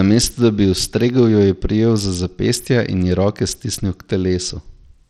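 From start to finish, the speech carries a gritty, grainy edge. The upper treble is thin and flickers in and out instead of holding steady. This is likely Bluetooth SBC compression. The codec splits the audio into a few wide bands. With too few bits to share, the top bands are starved and the rest are coarsely quantised. That leaves roughness and aliasing on the voice. The damage is plainly audible, which fits a low bitrate near 80 kbps.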